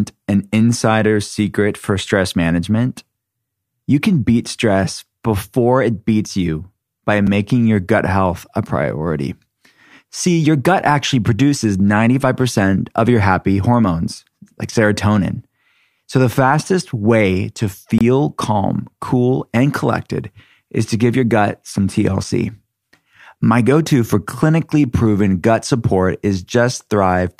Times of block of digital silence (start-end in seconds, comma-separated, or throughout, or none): 7.27, 17.98-18.01